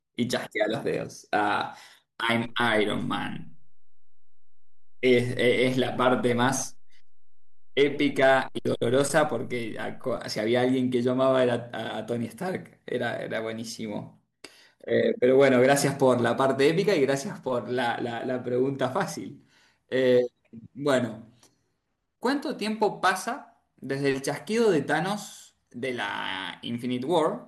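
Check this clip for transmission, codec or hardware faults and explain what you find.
One fault is present. A DC step shifts the waveform's zero line by about -37 dBFS from 2.45 s to 10.17 s, as when a converter recalibrates. Each edge gives a low thump, visible as a baseline jump and a brief low-frequency smear on a spectrogram.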